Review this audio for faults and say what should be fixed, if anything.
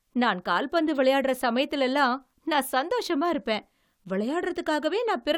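Nothing stood out on listening to this speech clip, so there is nothing to fix.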